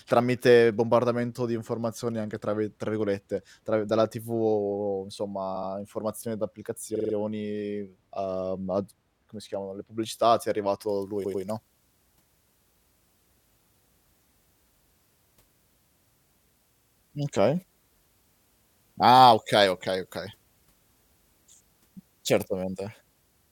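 At 5.55 s and 6.95 s the sound stutters, a 70 ms snippet playing twice more and then a 46 ms snippet four more times. These are repeated frames: runs of compressed frames were sent again and decoded again. From 10.89 s, just after "le pubblicità ti è", the speech turns thin, bright and sibilant, with about 14 dB too much treble at 10 kHz. This is pre-emphasis left on: a 75 µs FM-style boost was applied and never undone. The repeated-frames stutter returns at 11.24 s, a 93 ms block replayed twice, and at 16.74 s, a 70 ms block replayed three times.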